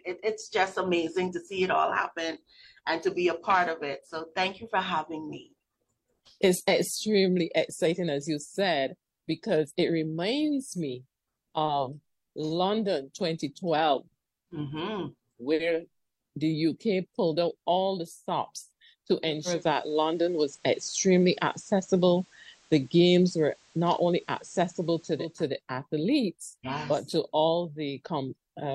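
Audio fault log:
19.23–25.47 s, digital radio blending to analogue: the receiver lost the digital stream and cross-faded over about 0.4 s to the station's FM broadcast, then back. While on FM, a steady hiss sits roughly 35 dB under the programme, with no jump in level. That hiss, together with the gradual fade at both ends, sets it apart from a codec simply dropping its bandwidth or a hard dropout.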